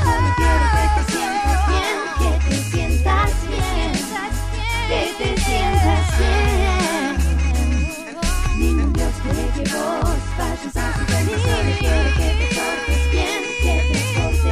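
No technical faults are audible.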